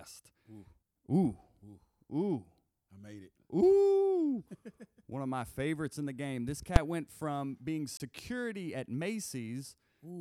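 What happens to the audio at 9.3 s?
Nothing goes wrong at 9.3 s; the speech carries on intact through that moment with no dropout, click or distortion.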